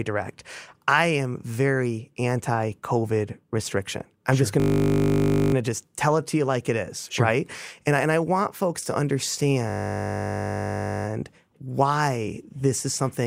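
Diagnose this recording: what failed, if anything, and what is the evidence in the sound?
A system hang loop occurs twice, from 4.6 to 5.54 s, between "I'm sure just going" and "to just tell it", and from 9.7 to 11.06 s, just before "why this is something". This is a driver or buffer fault. Each time, a 20 ms slice of sound repeats exactly, producing a steady 50 Hz buzz. The driver stalled while the hardware kept cycling one short ring buffer, and little or nothing seems missing once playback resumes.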